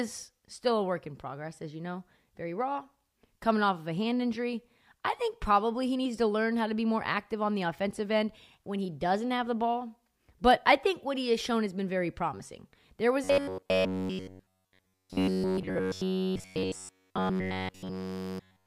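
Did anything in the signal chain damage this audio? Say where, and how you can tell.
Yes. Robotic sound from repeated short buffers runs from 13.24 s to 18.66 s. The speech hardens into a metallic 93.8 Hz buzz that only loosely tracks the words. A starved driver or buffer stage likely looped its last 10.7 ms chunk, skipping essentially all the real audio.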